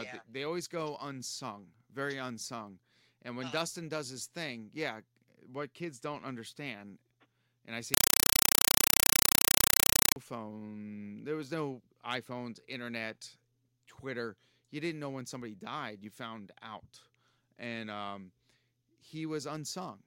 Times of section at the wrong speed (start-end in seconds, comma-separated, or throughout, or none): none